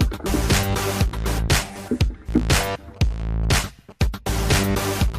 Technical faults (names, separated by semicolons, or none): repeated buffer; GSM signalling bursts